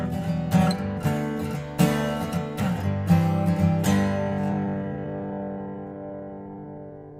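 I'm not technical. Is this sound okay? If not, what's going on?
No. From 4.2 s to the end there is a time-stretched section: the pace suddenly drops to about 60% speed and drags, yet the pitch stays the same. Slowed playback would also lower the pitch, so software stretching is the likely cause.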